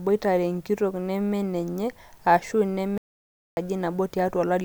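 Speech with an audio dropout to silence from 2.98 to 3.57 s, removing about 0.59 s. The sound cuts off abruptly and returns mid-flow, and the gap holds silence with no room tone, unlike a pause or gated noise floor. The likely cause is briefly lost input.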